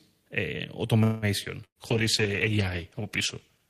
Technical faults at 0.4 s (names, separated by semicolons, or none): none